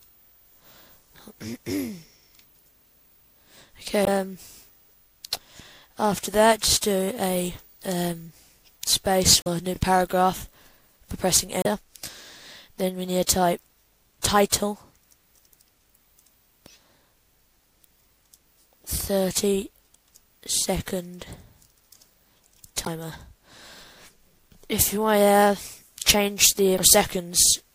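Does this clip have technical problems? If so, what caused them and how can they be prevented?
Yes. Damaged data in a compressed stream causes brief blips at 4.04, 9.42, 11.62, 22.82 and 26.75 s, each about 40 to 50 ms. The decoder loses frame sync and searches for the next frame header, leaving a short broadband smear in a spectrogram. Verified transfers with checksums prevent it.

Overlapping chunks add stutters at 9.76 and 19.78 s, one every 10 s, with 23.22 ms replayed at each join. The waveform shows a duplicated stretch with a step at the seam. Trimming each chunk's start to the previous end point prevents it.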